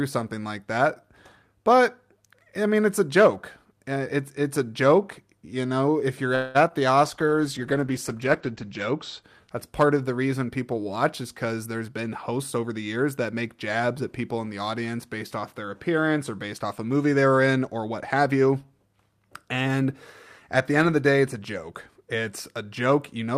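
From 6.35 to 6.57 s the sound stretches into a fading buzz for about 0.19 s, then resumes. This is a call audio freeze, likely from delayed packets emptying the jitter buffer.

At 6.69 to 6.72 s there is a short concealed packet loss. The missing audio was filled by extending the previous sound, leaving a brief smear.

From 7.06 to 9.29 s a call bitrate drop takes the encoder from 48 to 12 kbps. Bandwidth falls from 20 kHz to 8 kHz, so the speech turns muffled and rough.

From 11.24 to 13.49 s a jitter buffer speed-up trims short pitch-period pieces. The speech runs about 8% faster at unchanged pitch, losing roughly a fifth of a second.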